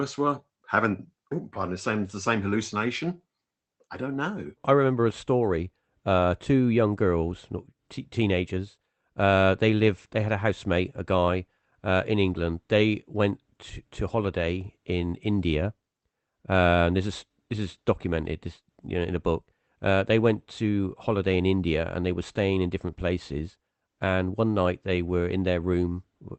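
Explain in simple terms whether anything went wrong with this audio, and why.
Nothing went wrong here.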